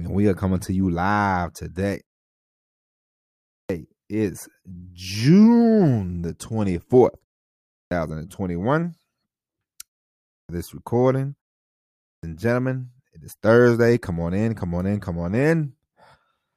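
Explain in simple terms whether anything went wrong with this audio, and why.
Four times in this speech, a word jumps in abruptly with its beginning missing: at 3.42, 7.65, 10.23 and 11.93 seconds, each right after a short silence. About a quarter to a third of a second is lost each time. This is a clipped start after a pause: the playback device dozes off during the quiet gap and needs a moment to wake, so the first sounds after the pause are swallowed.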